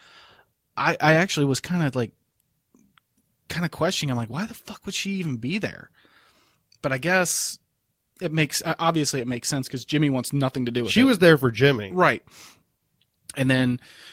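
At 5.27 s, between "the fuck would she" and "be there", a lost packet rebuilt from error correction: the next packet's low-bitrate copy fills 20 ms, sounding rougher and noisier but leaving no gap.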